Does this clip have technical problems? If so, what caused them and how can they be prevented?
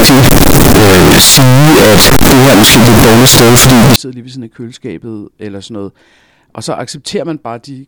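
Yes. Float read as integer, from 0.0 to 3.96 s: the speech turns into a very loud, harsh, nearly square waveform sitting at an almost fixed, high level, with background noise as loud as the speech, though pitch stays followable. This likely comes from 32-bit float samples being read as 32-bit integers, so sign and exponent bits dominate each value. Prevent it by declaring and checking the sample format at every read and write step.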